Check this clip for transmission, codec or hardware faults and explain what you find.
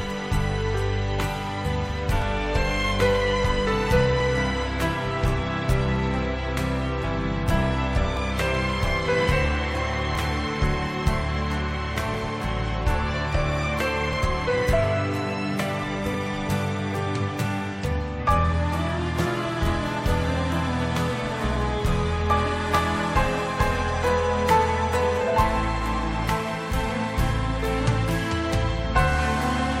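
One fault appears: overlap between stream segments. Short skips occur at 2.22, 4.20, 6.19, 8.17, 10.15, 12.14, 14.13 and 16.14 s, roughly every 2 s. Adjacent segments claim overlapping time, so the player discards about 10 to 15 ms of real audio. The waveform jumps, giving a tiny skip.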